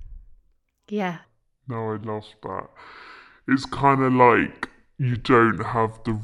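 From 1.25 s to the end, the speech plays as a section at the wrong speed, running at 0.614 times normal. Pitch drops together with tempo, by roughly ten semitones. The voice turns deep and dragging. Playback against a mismatched clock is the likely cause.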